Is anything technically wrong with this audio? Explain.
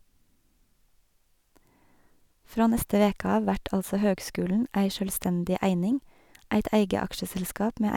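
No, nothing technically wrong can be heard here.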